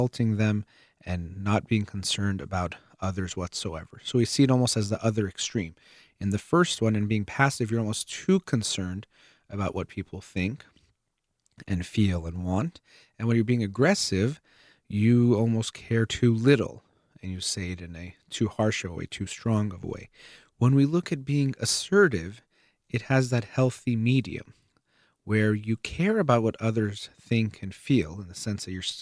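Listening to this speech recording, nothing technically wrong stood out at any point.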